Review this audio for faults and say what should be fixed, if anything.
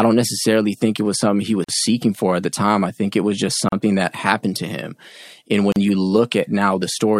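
Gaps at joins of encoded pieces: about 45 ms at 1.64 s, after "it was something he", and 38 ms at 3.69 s and 5.72 s. They fall every 2 s. Encoder delay and end padding stayed in. Trim encoder delay and padding before joining pieces, or encode the speech in one pass.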